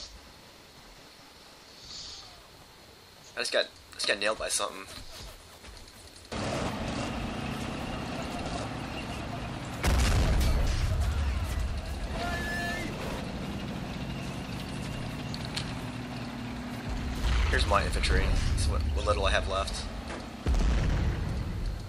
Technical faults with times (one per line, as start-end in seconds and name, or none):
none